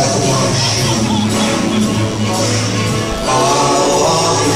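A nearby DECT handset or base station is sending its short radio bursts every 10 ms, and the audio circuitry is rectifying them, producing DECT cordless phone buzz: a steady, thin, harmonic-rich 100 Hz buzz running through the whole clip, roughly 20 dB below the wanted sound.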